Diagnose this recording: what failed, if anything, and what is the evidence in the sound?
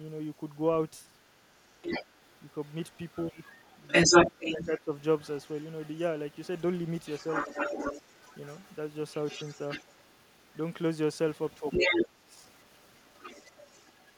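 Call processing: the echo canceller likely left residual echo, so the other side's voice leaking through appears at 1.3–8.76, 9.09–10.57, 11.53–12.05 s, and from 12.87 s onward.

Call processing: the canceller likely ducked everything during double talk, so speech is suppressed by about 15 dB at 4.32–4.89 s and about 20 dB at 11.82–12.35 s.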